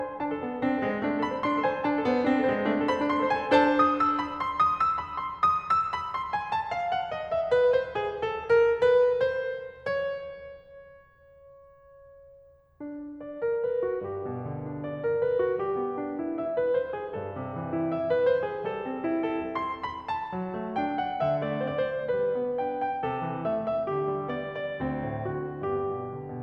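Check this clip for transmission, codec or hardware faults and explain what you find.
No faults turn up anywhere in this music.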